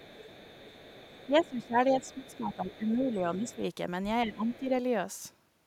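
From the start to 1.67 s a faint second voice sits under the speech, about 25 dB down. This is the other side's voice leaking through, likely because the far end played on a loudspeaker and the echo canceller left a residue in the microphone. It returns from 2.01 to 3.16 s, as a brief scrap at 3.49 to 3.56 s, and again at 4.46 to 4.59 s. Unlike a level dip, it adds a separate talker rather than changing the main one.

From 1.27 to 3.62 s, and again from 4.24 to 4.71 s, the talker's own voice keeps sinking, by as much as about 15 dB. This adds up to roughly two seconds across both spans. This is speech suppressed in double talk, likely the echo canceller turning everything down while both sides spoke at once. It differs from the leak because nothing extra appears. The main voice itself ducks and thins in pieces, and it overlaps the leaked voice.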